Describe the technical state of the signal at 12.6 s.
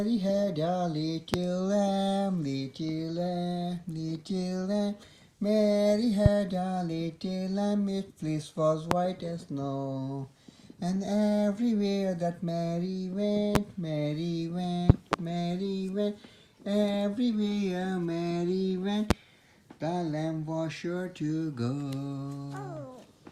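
At 12.6 s the signal runs cleanly, with no dropout, click, distortion or other fault audible at that point.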